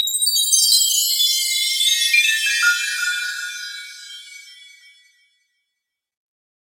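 From 0.92 to 4.81 s, channel delay doubling: one channel runs 40 ms late and sums to mono, giving a same-level slap; waveforms show every transient twice.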